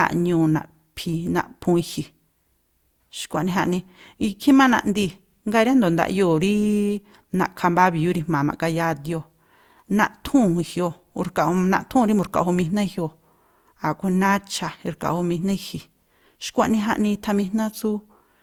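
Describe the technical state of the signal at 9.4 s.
Generation loss at 9.4 s, as throughout the speech: smeared, swirly and hollow, with blurred attacks, likely from roughly four passes through Opus at 64 kbit/s.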